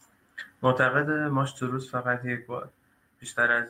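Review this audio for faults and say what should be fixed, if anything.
Nothing here needs fixing, as no technical fault can be heard anywhere in the clip. With no fault present, there is nothing to prevent and no change to the chain is called for.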